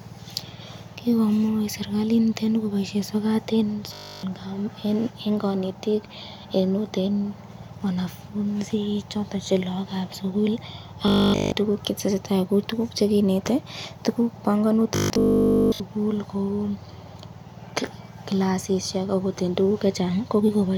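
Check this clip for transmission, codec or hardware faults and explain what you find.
The speech has one recurring fault, robotic sound from repeated short buffers, at 3.93–4.23 s, 11.08–11.52 s and 14.96–15.80 s. Each stretch becomes a rigid metallic buzz at 50 Hz, likely from a 20 ms chunk looped whenever fresh audio failed to arrive. A spectrogram shows evenly spaced 50 Hz harmonic lines, and the waveform shows identical repeating cycles.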